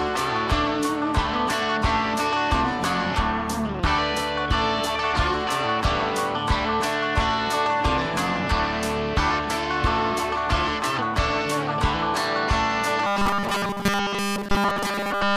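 From 13.07 s to the end at 15.37 s the sound collapses into a rigid metallic buzz at 200 Hz, the classic robotic sound from repeated short buffers. It's likely a starved stream looping a roughly 5 ms chunk the whole way through while the real audio gets skipped.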